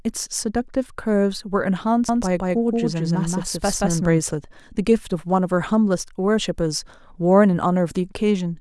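From about 2.09 s to 4.21 s the speech picks up a doubled audio track: a second, full-band copy trails the original by roughly a fifth of a second at about the same loudness. It's dry, with no decay or room sound, and it cuts in and out abruptly at both ends. The likely culprit is the same signal captured again through a slower path, or an edit leaving two copies out of step.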